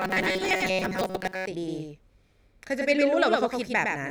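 From 0.01 s to 1.47 s the speech collapses into a rigid, metallic buzz pitched at 188 Hz, which is robotic sound from repeated short buffers. New audio likely arrived too rarely, so playback kept looping the last fragment of roughly 5 ms while most of the real audio was skipped. Unlike codec warble, the pitch stays locked at one tone, though the speech's rough shape still comes through.

For the whole clip a doubled audio track also sits under the speech: a second full-band copy, roughly a tenth of a second late and about 5 dB quieter. It is likely the same signal captured again through a slower path. Unlike room echo or reverb, this copy never decays or takes on any room colour. It is simply a clean duplicate running a fixed distance behind.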